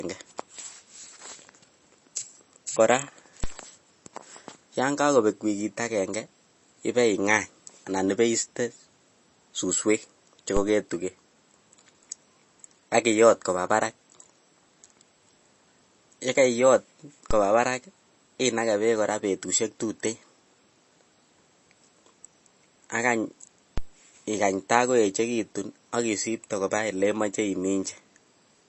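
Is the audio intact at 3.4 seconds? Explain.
No. A DC step hits at 3.44 s: the waveform's zero line jumps abruptly to a new offset, then drifts back toward centre as a highpass around 5 Hz slowly bleeds it away. That sudden shift is heard as a brief low thump or click riding on top of the speech, which itself carries on without interruption through the moment.

The moment also has the watery, swirly texture that runs through the whole clip, likely from MP3 compression. Nothing is present above 8 kHz, and weak frequency components flicker in and out between frames, smearing consonant onsets and leaving s sounds metallic. Damage this plain fits a low bitrate of around 32 kbps.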